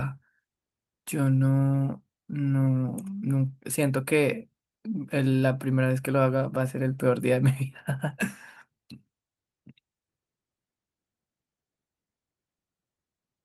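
A speech recording with nothing technically wrong with it.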